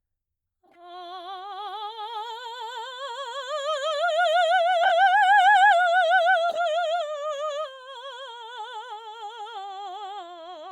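Corrupt frame decoded, three times in this music: faint at 0.66 to 0.77 s, a loud glitch at 4.83 to 4.92 s, and a moderate glitch at 6.49 to 6.58 s. Damaged compressed frames got played anyway, so misread data sprays energy into wrong frequencies.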